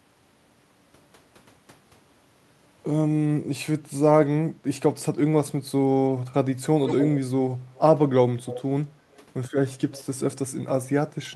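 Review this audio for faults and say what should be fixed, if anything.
Echo leak at 6.86–7.19, 7.74–7.79, 8.45–8.61, 9.12–9.17 and 9.93–10.04 s: a copy of the speech trails 180 ms behind. It is loudest in the first burst, only about 5 dB down, and quieter in the others, about 10 to 35 dB down. This is likely the far end's loudspeaker output that its echo canceller failed to remove. Room reverb decays smoothly, but this copy arrives at a fixed delay in broken scraps. To prevent it, the far end should use a headset or retune its echo canceller for its loudspeaker-to-microphone path.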